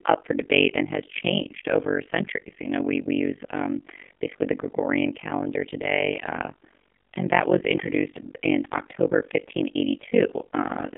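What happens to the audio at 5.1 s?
At 5.1 s, as across the whole clip, the speech passes through an AMR narrowband mobile codec. The voice is confined to a telephone band of roughly 200 Hz to 3.5 kHz with nothing above. Heavy damage gives a buzzy, synthetic tone, which fits a very low rate near 5.9 kbps. Unlike a plain low-pass filter, it adds vocal-tract-model artefacts.

An overlap-add ripple is also present throughout. Frames were rejoined with overlaps that don't sum to constant gain, so the level swings by about 60 dB once per frame, around 50 times a second. It sounds like a rough, fast flutter. Its fixed, very fast frame-rate pulsing sets it apart from ordinary tremolo or dropouts.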